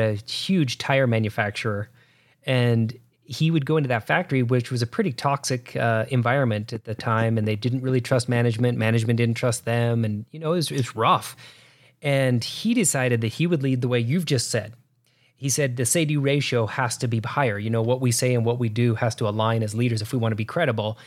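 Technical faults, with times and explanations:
6.76–9.06 s: train of clicks. After "pretty toxic uh environment", about ten near-identical clicks arrive at a regular 4.4 per second, peaking roughly 5 dB above the speech and ticking through pauses until "didn't trust them and", likely interference from nearby equipment or a faulty connection.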